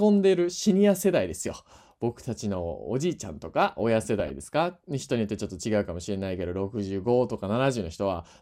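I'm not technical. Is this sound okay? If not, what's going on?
No. From 4.20 to 4.30 seconds there is DAB burbling. Weak digital radio reception garbled the signal. This caused brief blips of noise over the speech.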